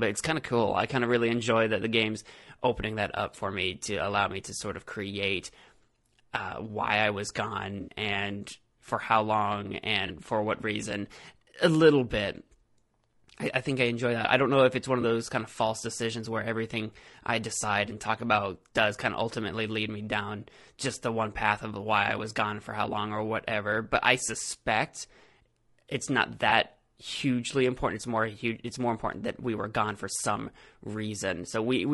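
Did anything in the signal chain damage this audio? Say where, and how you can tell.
Yes. At the codec stage the speech is plainly damaged throughout the whole clip. It sounds rough and grainy, with noise filling the gaps between voice harmonics and a top band that sounds thin and synthetic. That points to low-delay AAC compression, likely AAC-ELD. Its short frames resolve pitch harmonics poorly, and the lost detail is replaced with shaped noise. The degree of damage fits a bitrate of around 32 kbps.

Further along, at the network stage, AAC frame loss with concealment appears as four brief smeared, phasey patches. The first runs from 7.81 to 7.91 s, just before "and for how long", and fits three lost 20 ms frames. Single-frame gaps follow at 10.07 to 10.11 s, at 15.01 to 15.04 s between "if it's one of" and "those kind of false", and at 26.49 to 26.53 s between "it's not" and "hugely important". 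The decoder fills each gap by reusing the last good spectrum.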